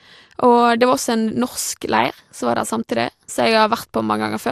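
MP2 compression artefacts run through the whole speech clip, and the sound is dull and marked by a gurgling, granular distortion that is plainly audible. The likely cause is MPEG Layer II coding at too low a rate, which fits roughly 80 kbps: with bits scarce, the encoder shuts off whole upper sub-bands and flickers others on and off, while the bands it keeps are coarsely quantised, leaving the top end muffled and grainy.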